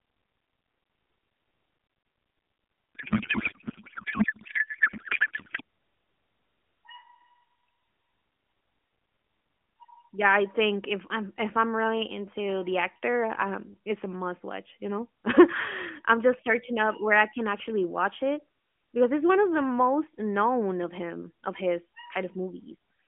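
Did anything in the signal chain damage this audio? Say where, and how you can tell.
Yes, at the codec stage. From 2.95 to 5.61 s the speech turns into garbled warble that barely tracks it. That's a codec payload misread: the AMR frames sound like octet-aligned packing unpacked as bandwidth-efficient, so every field lands in the wrong place.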